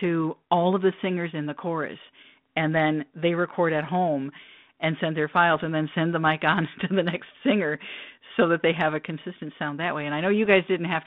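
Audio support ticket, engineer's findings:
Bit errors on the ADPCM link, 5.56–5.61 s, after "home and send their", before "and then send the": pop plus rough burst, brief level change. Flipped bits knock the decoder's step size and predictor off, so the damage rings on a few ms. Second hit at 10.45 s, after "consistent sound that way", two frames hit. Error rate looks low, a few tenths of a percent. Underlying link sounds like 32 kbit/s G.726 with a narrow band of about 150 Hz to 3.6 kHz.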